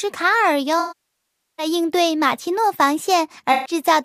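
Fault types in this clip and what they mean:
AAC frame loss with concealment: sound fades toward silence at 0.79–1.66 s and smears briefly at 3.53–3.73 s, as the decoder refills lost frames from the last good spectrum.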